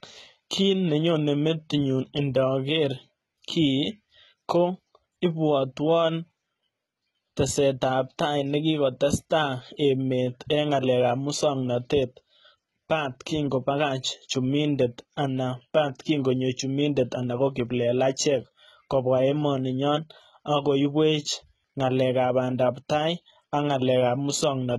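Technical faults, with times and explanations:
Throughout, HE-AAC compression: nothing above 11.8 kHz, and the copied-up treble makes s sounds gritty and metallic, likely from a very low bitrate near 16 kbps.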